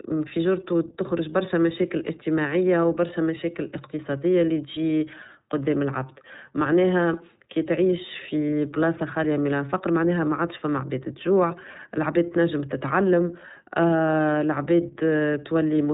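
iLBC codec damage runs throughout: nothing above 3.8 kHz survives, and independently coded 30 ms frames, consistent with 13.33 kbps, leave the speech plainly rough and synthetic.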